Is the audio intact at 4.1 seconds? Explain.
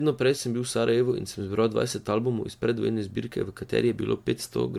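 No. At 4.1 seconds, as across the whole clip, the speech carries generation loss. The sound is swirly, hollow and smeared, with blurred consonant attacks and nothing above about 19.9 kHz. This is likely from roughly ten rounds of lossy re-encoding, MP3-like at around 110 kbit/s, each pass quantising on a fresh frame grid so that noise and spectral holes pile up. A single encode at that rate would sound far cleaner. The excess swirl and hollowness is what separates this from one low-bitrate pass.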